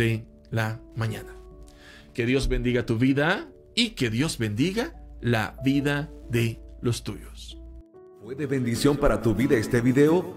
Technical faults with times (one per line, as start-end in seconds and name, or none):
0.00-10.37 Wi-Fi interference